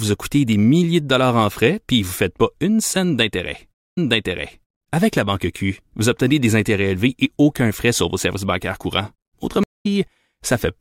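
Speech, with two stream reconnects. At 3.75 s the audio drops out for 163 ms and resumes about 0.76 s earlier, repeating material as a resent burst is decoded afresh. At 9.63 s a 160 ms gap resumes roughly a fifth of a second later, skipping ahead.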